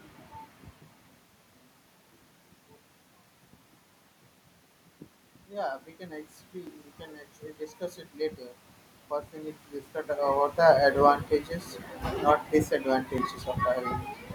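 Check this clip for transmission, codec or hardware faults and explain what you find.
Two system faults are audible: a regular ticking from clock drift and one gain swell.

Clock drift buffer slips, from 0.16 s to 13.18 s: the sending and receiving clocks likely disagree by roughly 700 ppm. The buffer between them slowly drifts until a block of about 50 samples is dropped or repeated. About ten clicks result, spaced every 1.3 s wherever sound is present.

Automatic gain rising, from 5.49 s to 6.83 s: the gain control judged the input too quiet and raised its gain by about 4 dB over roughly 1.3 s. Speech and the background noise of the room swell together, so the rise affects the whole signal rather than the speech alone.

The level shifts near 0.5 s and 10 s sound like the talker moving relative to the microphone, not like the system.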